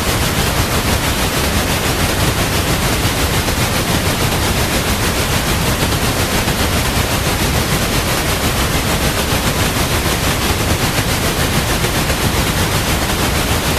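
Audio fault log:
7.80 s and 13.03 s: damaged data in a compressed stream. Each is a brief blip. Corrupted bytes make the decoder misread frames and hunt for its next sync point.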